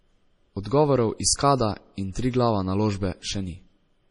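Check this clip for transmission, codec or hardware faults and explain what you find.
Two faults are present: heavy lossy-codec damage across the whole clip, and two brief pre-echoes.

MP3 compression runs throughout. Nothing is present above 10.5 kHz, and the speech has a watery, swirling texture with smeared consonants. The likely cause is an MP3 encoder starved of bits, consistent with a low rate around 32 kbps, cutting the treble and switching weak frequency lines on and off between frames.

Pre-echo occurs at 0.63 to 0.65 s and at 2.12 to 2.15 s, a short hiss of about 23 ms and 33 ms. Sharp attacks fall late in transform blocks, so quantisation noise sized for the loud onset spreads into the quiet moment just before it, softening each attack.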